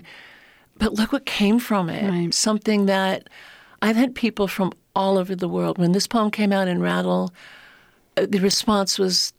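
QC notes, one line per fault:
8.51–8.54 s, chunks out of order: a short stretch of speech plays in the wrong sequence. One roughly 10 ms piece arrives about two pieces late and plays after those that follow it. Nothing is lost, but three hard joins cause a brief jumbled moment.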